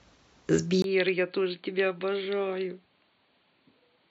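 At 0.82 s the speech cuts out for about 20 ms. From there to the end it sounds dull and boxy, with nothing above 4.6 kHz. The level falls by roughly 10 dB, over a new faint noise floor. This is likely an input switched to a poorer device.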